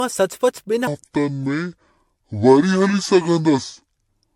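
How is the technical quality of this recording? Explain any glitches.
The recording has two clear faults. One runs through the whole clip and one affects nearly all of it.

Generation loss, throughout: the audio was likely decoded and re-encoded with MP3 about seven times, consistent with 96 kbit/s. Each pass stacks new quantisation noise, so the speech sounds swirly, hollow and smeared, with blurred attacks.

Section at the wrong speed, from 0.87 s to the end: playback likely ran against the wrong clock at 0.625 times normal speed. The speech drops roughly seven semitones and becomes deep and dragged out.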